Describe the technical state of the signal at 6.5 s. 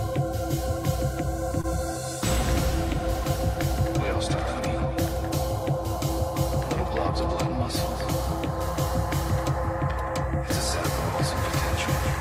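At 6.5 s the signal is intact, with no audible dropout, distortion, glitch or other technical fault at that point.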